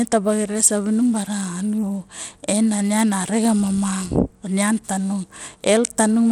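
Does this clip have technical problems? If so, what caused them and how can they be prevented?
Yes. Across the whole speech clip there's a gritty, grainy edge and the top end thins out, with nothing above 17.3 kHz. That's likely Bluetooth SBC compression: the codec splits the audio into a few wide bands, starves the weaker upper ones of bits and quantises the rest coarsely, and the damage here is plain enough to suggest a low bitrate, somewhere around 96 kbps. To prevent it, record over a wired connection or use a higher-quality Bluetooth codec or bitpool.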